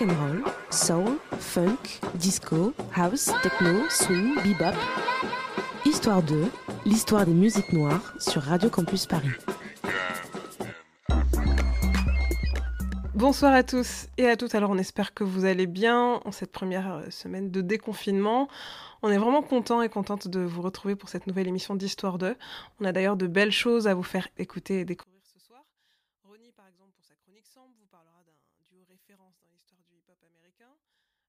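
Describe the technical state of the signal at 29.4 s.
One channel inverted is the likely cause at 29.4 s, within a span from 25.03 s to the end at 31.28 s. One stereo side has flipped polarity, so material common to both channels cancels when summed to mono. The level drops about 36 dB, leaving only a faint trace of what differs between them.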